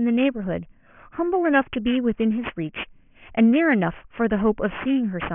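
Aliasing runs throughout the speech, consistent with a drop from 24 kHz to 6 kHz sampling without an anti-aliasing filter. Content above 3 kHz folds back below it at roughly 15 dB under the speech, making sibilants gritty and metallic, with the spectrum pressed hard against 3 kHz.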